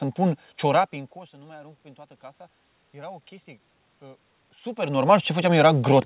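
From 1.31 to 3.35 s the automatic gain rising fault appears: the gain control, reacting to an input that fell by about 23 dB, slowly lifts its gain by about 3 dB. Speech and room noise swell together across those two seconds.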